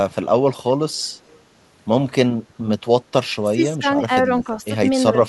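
From 0.97 to 1.09 s and again from 1.27 to 1.4 s, faint scraps of echo leak trail the speech by 345 ms, roughly 40 and 35 dB down. A far-end echo canceller likely let loudspeaker pickup through. On a spectrogram, weak, delayed copies of earlier harmonics appear.

Between 3.48 and 4.26 s, at 4.43 to 4.7 s, and at 5.11 to 5.2 s, the speech is suppressed in double talk. Level drops by about 20, 10 and then 5 dB, likely because the canceller ducked the talker while the other side spoke. The waveform envelope sags, and the spectrogram thins.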